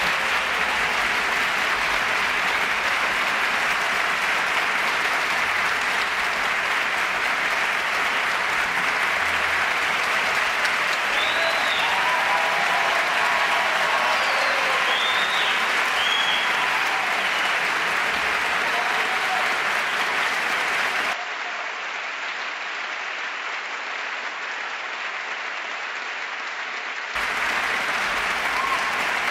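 At 21.13 s the sound abruptly goes dull and boxy, with nothing above about 7.6 kHz, and it drops a few dB in level. A faint new background noise comes in well beneath it. There's no gap at the change, just an instant jump in tone. That points to an input switched to a poorer device, likely a different microphone or a headset's call profile. At 27.15 s the fuller, brighter sound returns just as suddenly.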